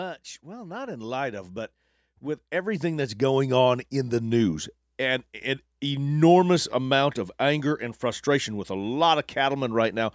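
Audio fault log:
0.42 to 4.24 s, automatic gain rising: the call's automatic gain control judged the input too quiet and lifted its gain slowly, by about 12 dB over nearly four seconds, so the speech and the background noise swell together rather than the talker simply getting louder. On a waveform the envelope widens steadily across that span; on a spectrogram the whole band brightens evenly, noise floor included, up to the 8 kHz ceiling left by the call's microphone processing.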